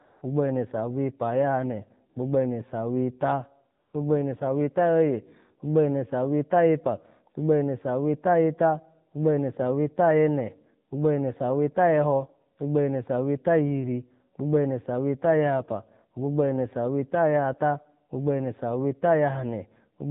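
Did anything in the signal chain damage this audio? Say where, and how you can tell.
Yes. The codec stage is at fault throughout: this is AMR narrowband mobile codec damage, plainly audible. Nothing above 4 kHz survives, and the speech has the buzzy, synthetic edge of a vocal-tract model excited by only a few pulses per subframe. The degree of coarseness fits a low AMR-NB mode around 7.4 kbps. Unlike a simple low-pass filter or resampling, which would just dull the sound, this adds that artificial, pulse-driven texture.

The second fault is AMR comfort noise, a call-processing effect: 0.06–0.22 s (160 ms), 2.10–2.16 s (60 ms) and 3.80–3.94 s (140 ms). In each gap the phone judged the talker silent and stopped sending speech frames, so the receiver filled the gap with smooth synthetic noise. The real background is replaced by a steady hiss that switches in and out. A dropout or gate would leave near-silence instead.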